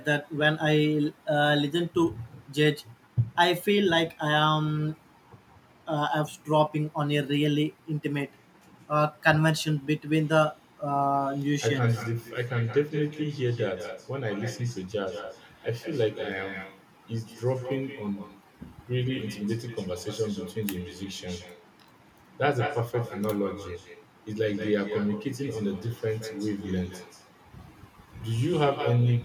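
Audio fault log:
throughout, echo with no canceller: every phrase of the speech is trailed, around 150 ms later, by a second copy sitting about 12 dB down, thinner than the original. The far end is playing the call over a loudspeaker into an open microphone, and nothing strips that pickup out before it returns. Unlike room reverberation, the tail is a distinct repeat after a clear gap rather than a smooth decay, and it carries the loudspeaker's coloration.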